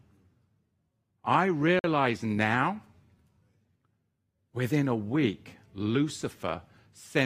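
At 1.79 s the output path stops delivering samples for about 48 ms, until 1.84 s, and that stretch of the speech is replaced by a block of digital silence, pointing to a buffer that was not filled in time. Because the signal drops straight to zero and returns with no fade, the gap is heard as a brief, hard-edged hole in the speech rather than a single tick.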